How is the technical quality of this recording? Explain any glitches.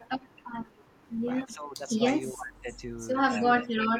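The recording has two linked call-path problems: faint echo returning in short scraps, and the talker's speech being pulled down in level several times.

Echo leak appears at 0.19–0.32 s, 0.82–0.92 s, 1.48–1.54 s and 2.26–2.32 s. A delayed copy of the speech trails it by about 322 ms. It is quiet at first, around 35 to 40 dB below the speech, and grows to roughly 20 to 25 dB below by the later bursts. The likely cause is a far-end loudspeaker's echo canceller letting part of its microphone pickup through. On a spectrogram, these show as faint repeats of the speech's harmonic pattern shifted about a third of a second later.

Speech suppressed in double talk occurs at 1.55–1.89 s, 2.32–2.66 s, 3.52–3.68 s and from 3.89 s to the end. The speech dips by about 10 dB, about 20 dB, about 10 dB and about 30 dB respectively, sounding muffled or briefly cut away. The first two dips begin right after echo bursts, which points to the likely cause: the echo canceller confusing the overlap with echo and attenuating everything. 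The waveform envelope shows abrupt sags.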